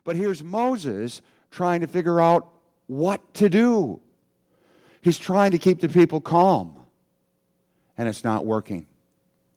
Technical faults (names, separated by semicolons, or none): automatic gain rising